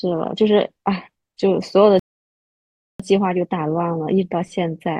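Speech clip with a rebuffering stall from 1.99 to 3.00 s: the player exhausted its downloaded audio and halted, leaving about a second of silence. Playback then resumes exactly where it stopped, so nothing is lost, but roughly 1.0 s is added.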